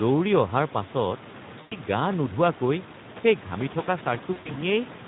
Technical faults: Speex codec; VoIP packet loss concealed by the speech codec

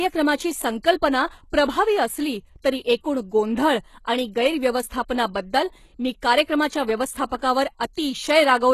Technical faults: HE-AAC compression

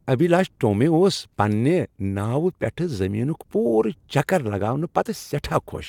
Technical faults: none

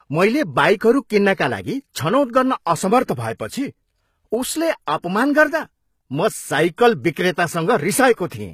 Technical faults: HE-AAC compression; pre-echo

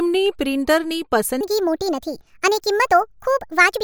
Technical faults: section at the wrong speed

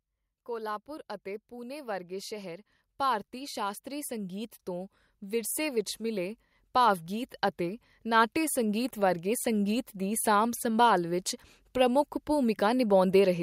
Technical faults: automatic gain rising

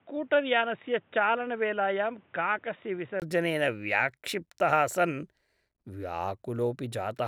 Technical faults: input switched to a poorer device

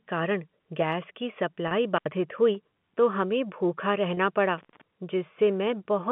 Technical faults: packet loss with pitch repetition; intermittent contact

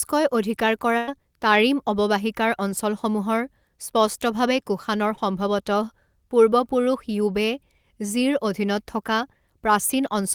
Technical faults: burst of packet loss; short concealed packet loss

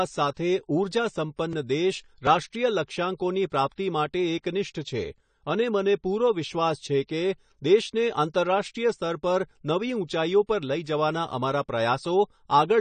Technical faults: AAC compression

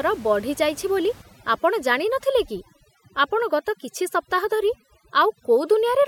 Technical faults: overdone noise removal

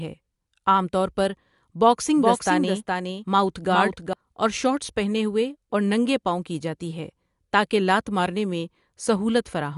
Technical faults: doubled audio track

